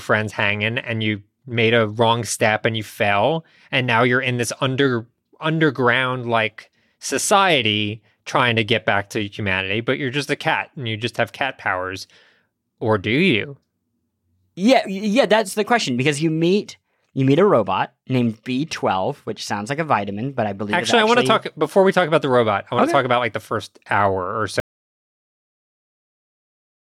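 A speech clip with an audio dropout to silence from 24.6 s to the end at about 26.87 s: the sound cuts off mid-flow into silence with no room tone, likely from a lost input or link. The waveform flatlines and the spectrogram goes blank.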